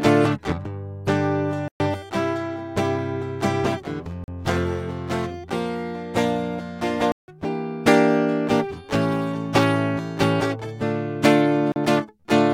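A music clip with four blocks of digital silence. The music drops to silence and returns abruptly. The gaps fall at 1.68 s for 120 ms, 4.24 s for 40 ms, 7.12 s for 160 ms and 11.72 s for 40 ms. The shorter ones are brief holes. The longer ones are audible holes. Each is a run of samples replaced by zeros, as when the output buffer is not filled in time.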